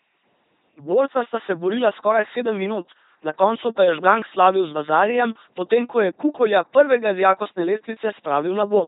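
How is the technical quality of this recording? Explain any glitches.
The quality is poor. The speech runs through an LPC-10 vocoder from start to finish, and the damage is heavy. The coder rebuilds speech from a simple filter of up to ten poles. It excites that filter with either a pulse train or noise, and each moment is treated as fully voiced or fully unvoiced. The result is a buzzing, mechanical robot voice. Nothing is heard above 3.8 kHz. The coarse sound fits a rate of about 2.4 kbit/s.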